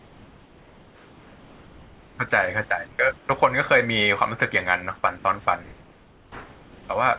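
Discontinuous transmission likely halted the stream in pauses, so comfort noise in place of the background fills 0.00–2.18 s, 2.87–2.99 s, 3.17–3.29 s and 5.63–6.89 s: the room hiss turns flat and featureless, about 2 dB quieter (about 4 dB at 3.17 s).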